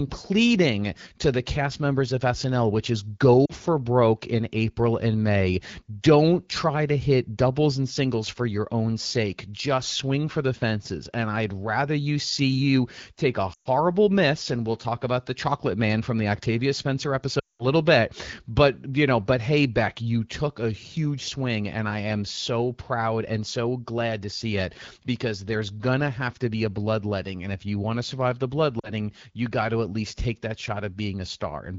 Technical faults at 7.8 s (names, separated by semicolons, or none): none